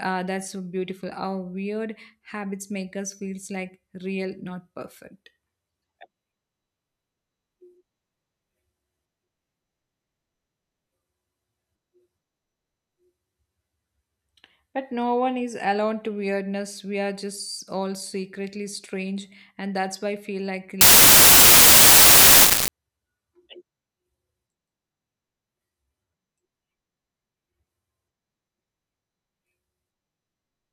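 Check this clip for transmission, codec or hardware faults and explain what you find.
One fault is present: samples built from the wrong bytes, from 20.81 to 22.68 s, right after "I feel like a". The reader misassembles each sample's bytes, so the fast-changing low bits dominate and the speech becomes loud, harsh broadband noise, close to white on the louder sounds.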